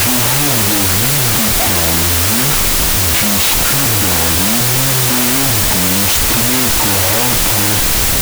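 From start to end, a wrong sample width fault runs through the speech. It sounds like loud, harsh noise with the voice buried inside. The speech plays at half speed, an octave low. That fits 32-bit float data being read as 16-bit integers, splitting each sample into two.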